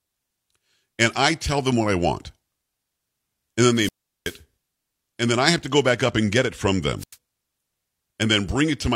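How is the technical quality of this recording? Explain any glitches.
The recording is marred by two wireless microphone squelch dropouts. From 3.73 to 4.40 s and again from 6.98 to 7.16 s, the analogue FM radio link fades and hiss briefly rises. The receiver's squelch then mutes the output for 376 ms and 91 ms respectively, leaving near-silent holes before the speech returns.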